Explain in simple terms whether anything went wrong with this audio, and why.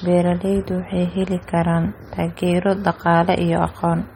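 Throughout the clip, the speech sounds watery and swirly. The s sounds are harsh and metallic, and sharp starts blur. Nothing is heard above about 16.6 kHz. This is likely MP3 compression, squeezed hard enough that the encoder dropped faint sound detail.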